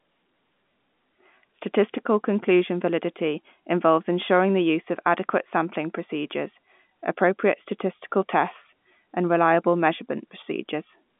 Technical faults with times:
none

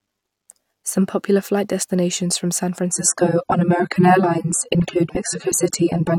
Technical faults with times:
2.92-6.18 adaptive stream at a lower bitrate

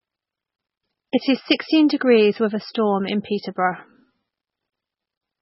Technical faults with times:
0.00-5.41 MP3 compression

